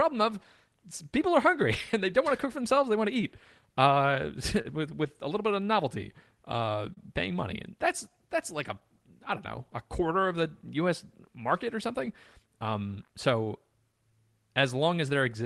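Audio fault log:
Throughout: clock drift between sender and receiver. The sending clock runs about 2 percent slower than the receiving one, so the jitter buffer keeps draining and the receiver must keep adding material to stay fed. The speech therefore drags very slightly and carries small hiccups at uneven intervals rather than one obvious break. On a waveform, syllable spacing stretches gradually. A spectrogram shows occasional smeared or doubled frames wherever the buffer was topped up.
0.69 s to 14.62 s: repeated timing corrections. To compensate for the slow sender, the receiver repeatedly stretches short pieces, all in the same direction, adding around 150 ms over the stretch. This is equivalent to playing at 99 percent speed. The edits are unevenly spaced and individually tiny, heard mostly as an unsteady tempo. On a spectrogram, harmonic traces show brief flattened or duplicated segments. 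The waveform shows periodic cycles that repeat where a pitch period has been reused.
2.29 s to 4.66 s, 8.80 s to 10.68 s, 12.06 s to 13.94 s: scattered short gaps. About five, four and four packets arrive late in these spans. Each hole is patched by continuing the preceding sound, covering roughly 70 ms, 30 ms and 40 ms respectively. The longest single patch is around 40 ms, in the first span, and nothing is actually lost. Each patch sounds like a tick or smear. On a spectrogram these appear as short stretches of frozen, slightly blurred harmonics.
6.94 s: short stall from a late packet. A packet is not ready when due and the jitter buffer runs empty. The receiver holds the last sound for 31 ms until the packet turns up, then resumes from the same point, adding 31 ms of delay. The result is a momentarily sustained sound with a slight buzzy quality. A spectrogram shows a horizontal smear of unchanging partials, and the waveform shows a small dip at the resumption. 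The call codec's band limit near 12 kHz is visible as an empty region above it.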